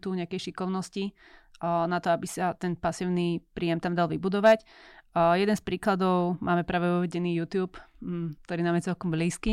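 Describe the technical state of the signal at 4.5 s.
At 4.5 s the speech hits hard clipping, from 4.46 to 4.53 s, roughly 70 ms. The level there runs about 4 dB beyond what the signal path can carry, so the waveform peaks are sheared off flat instead of rounding over. Those squared tops generate a spray of high-order harmonics well above the speech band, heard as a brief gritty crackle riding on the loudest part of the sound before the level drops back within range.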